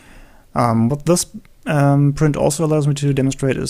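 No technical fault can be heard anywhere in this audio. Nothing in it calls for correction or explanation.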